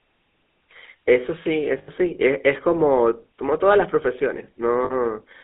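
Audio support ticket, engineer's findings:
GSM full-rate codec artefacts throughout: buzzy, gravelly speech, band limited to 200 Hz–3.6 kHz, consistent with 13 kbps GSM; spectrogram shows empty region above 3.6 kHz, coarse harmonics.

Lost GSM frames at 1.78–1.89 s and 4.84–4.94 s: metallic held ring as last good frame repeats; waveform shows repetitive cycles, spectrogram frozen bands.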